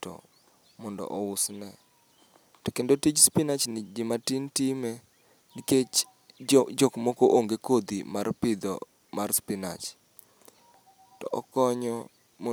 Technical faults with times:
none

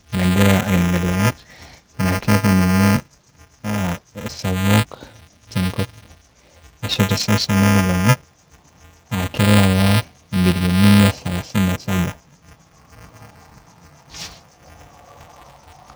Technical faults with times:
0.00-15.95 low-delay AAC compression
0.00-15.95 buffer tearing
13.50 block of digital silence

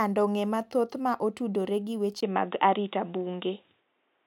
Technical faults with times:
2.21-4.26 input switched to a poorer device

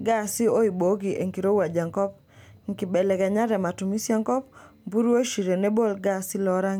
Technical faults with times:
none

